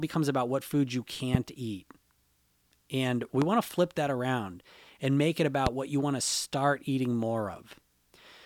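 Three loud pops interrupt the audio, at 1.35 to 1.37 s, 3.42 to 3.44 s and 5.67 to 5.69 s. Each is a single sharp transient lasting about 25 ms and peaking roughly 20 dB above the surrounding signal, which carries on underneath without a break. The short, isolated spikes are most likely caused by voltage pulses entering the chain from a switch, a connector, static discharge or a driver glitch, shaped briefly by the circuits that follow.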